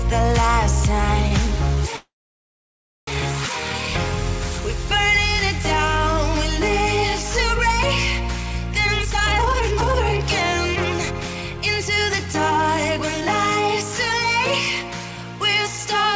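The audio has come through a call path whose band stops at 8 kHz, which fits a G.722 codec at 64 kbps. At 1.28 to 1.33 s there's a short stall from a late packet. The jitter buffer ran dry, so the receiver held the last sound for about 29 ms until the packet arrived and then picked up where it left off. Nothing is lost, but you hear a brief drawn-out bit. From 1.96 to 3.09 s there's a call audio freeze, most likely from packets getting held up in transit. The last sound is stretched into a fading tail, then about a second of silence, and the audio resumes exactly where it stopped. That adds roughly 1.1 s of gap without dropping anything. Later the jitter buffer speed-up kicks in as the receiver works off the extra delay by snipping out tiny pitch-period slices. From 8.84 to 12.59 s it runs at 128% speed and trims roughly a second, so it sounds noticeably rushed at the same pitch. A milder pass from 12.98 to 13.93 s at 105% removes only about 50 ms.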